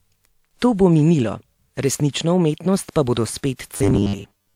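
From 3.74 s to 4.55 s, right after "resnično umetnost pa bodo", the speech turns into a rigid, metallic buzz at 100 Hz, robotic sound from repeated short buffers. A 10 ms segment is likely being looped over most of that span in place of new audio. Unlike dropouts, there are no silent gaps, and the buzz stays fixed instead of following the pitch.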